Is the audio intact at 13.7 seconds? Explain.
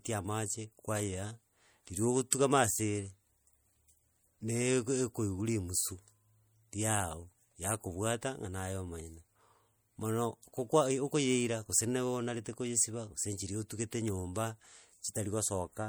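No, at 13.7 seconds the speech carries the same MP3 compression damage heard across the whole clip. Weak detail flickers in and out between frames, giving a watery, swirly edge and metallic chirps on s sounds. That points to a likely low bitrate around 64 kbps.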